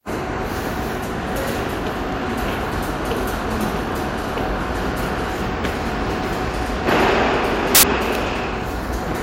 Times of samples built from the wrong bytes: 7.75-7.83

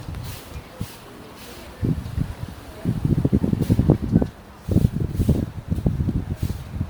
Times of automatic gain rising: none

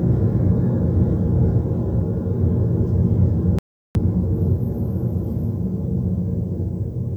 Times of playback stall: 3.59-3.95

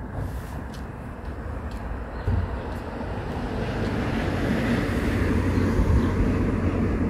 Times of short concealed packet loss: none

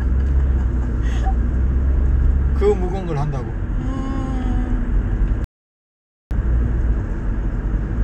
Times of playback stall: 5.44-6.31

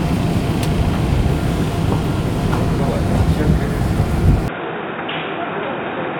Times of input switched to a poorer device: 4.48-6.20

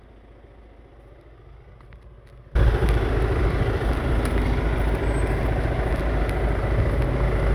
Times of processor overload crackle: none

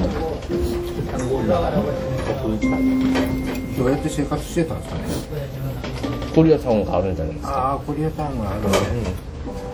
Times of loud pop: none

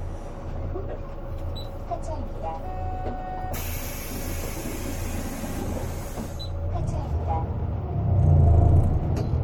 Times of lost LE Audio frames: none

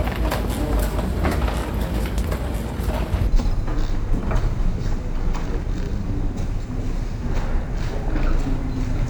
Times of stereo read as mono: 3.27-9.09

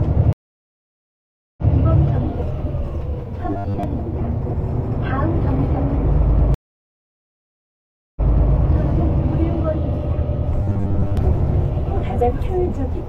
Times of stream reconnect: 0.33-1.71, 6.54-8.53

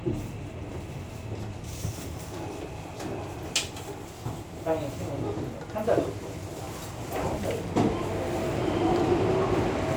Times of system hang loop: none

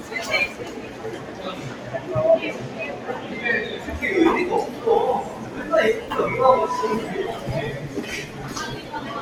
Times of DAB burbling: none

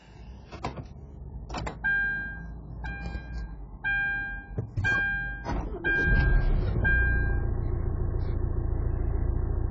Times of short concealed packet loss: none

